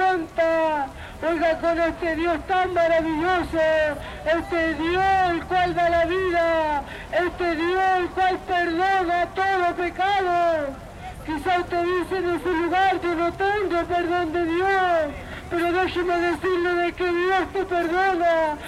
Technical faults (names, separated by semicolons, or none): none